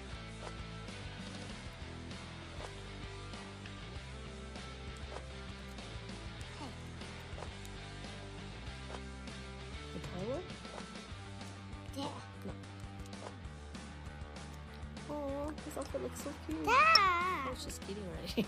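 Two brief blips break into the audio, one at 12.63 s and another from 16.95 to 16.97 s, each lasting about 20 ms. This is damaged data in a compressed stream: corrupted bytes make the decoder misread those frames and lose sync until it locks onto the next valid frame header.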